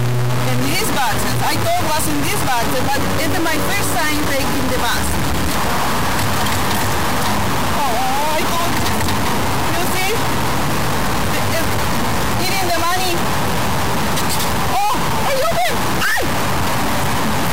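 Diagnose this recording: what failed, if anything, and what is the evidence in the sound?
A stuck bit, most likely in the converter or its data lines, runs throughout: harsh buzz on everything, with noise filling the pauses. One pinned bit shifts about half the samples by a fixed step near -15 dBFS. Unlike clipping, quiet passages suffer too.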